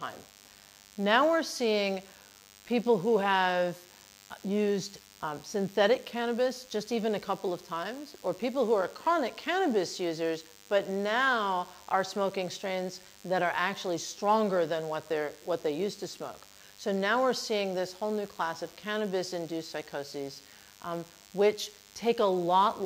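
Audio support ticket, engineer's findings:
DECT cordless phone buzz, throughout. Thin, steady 100 Hz buzz with dense harmonics, about 25 dB below programme. A nearby DECT handset or base bursts every 10 ms; the audio input stage rectifies the RF into audible buzz.

Clock slip clicks, 0.10 s to 22.85 s. Faint ticks about every 50 ms, a soft rattle loudest on sustained material. Likely two unsynchronised clocks differing by a few hundred ppm, dropping or repeating one sample per slip.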